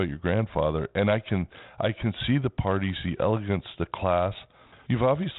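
No technical faults are audible.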